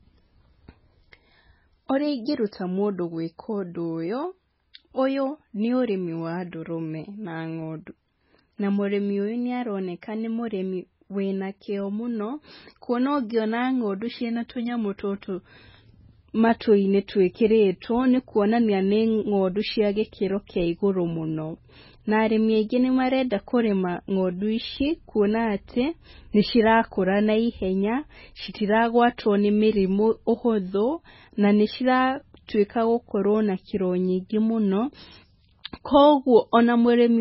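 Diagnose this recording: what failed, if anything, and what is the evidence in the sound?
The codec stage failed. Throughout the speech nothing survives above 5.6 kHz, and the remaining band sounds watery and swirly, pointing to a very low bitrate near 16 kbps, likely heavy MP3 compression. A spectrogram shows a flat ceiling at 5.6 kHz, with patchy, flickering holes below it.

Pre-echo, also from the codec, appears at 4.73 s as a short hiss spreading about 16 ms ahead of a sharp onset, which sounds softened. The block's quantisation noise smears backwards before the attack, visible in the waveform as a low noise smudge preceding the transient.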